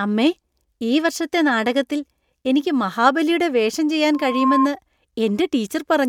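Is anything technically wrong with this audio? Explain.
Yes. There is a loudspeaker feedback squeal from 4.13 to 4.69 s, right after "എനിക്ക് മഹാബലിയുടെ വേഷം ചെയ്യാൻ". A microphone is picking up the loudspeaker it feeds. At about 1.1 kHz the loop gain goes above one, so that frequency keeps reinforcing itself. A single whistling tone swells up over roughly a third of a second. It then sits about 5 dB above the speech before it stops.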